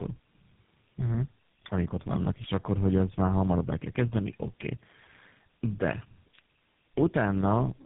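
Tandem speech coding throughout: G.729A, then GSM full rate twice, each re-coding earlier damage, leaving rough, warbly, muffled speech with nothing above 3.8 kHz.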